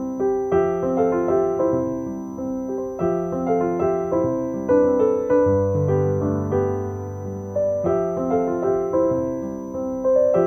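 Switching supply whistle runs throughout: a faint high tone wandering between 5.98 and 6.05 kHz, roughly 40 dB below the signal, from a power supply cycling audibly.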